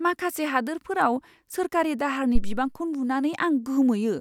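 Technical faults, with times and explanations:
2.35–2.68 s, phantom power thump: a supply was switched on a live input just after "माखासे हादोरफोराव सोरखारि दाहारनि", and the sudden voltage step passed through the coupling capacitors, producing a deep thump that peaks at about -9 dBFS and decays over 74 ms.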